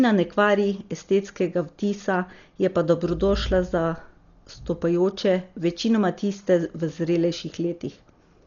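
From start to finish, the speech sounds dull and boxed-in, with nothing above about 7 kHz, and a rough, fluttering hiss clings to the voiced sounds. That's likely Dolby Digital compression run hard: starved of bits, the encoder trims the top of the band and leaves many frequency lines empty, and the decoder pads them with noise. The heavy damage fits a bitrate somewhere around 40 kbps.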